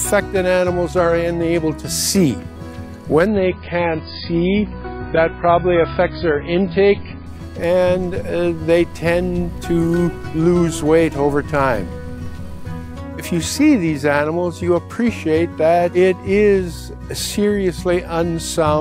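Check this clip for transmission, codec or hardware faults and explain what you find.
One fault is present: an adaptive stream at a lower bitrate, from 3.26 s to 7.26 s. For those four seconds the player evidently switched to a much cheaper encoding of the same material, which sounds like a drop from roughly 128 kbit/s MP3 to something near 16 kbit/s. Nothing above 5 kHz survives, so the sound turns dull and swirly with added codec artefacts. The switch happens abruptly in both directions, with no gap or dropout.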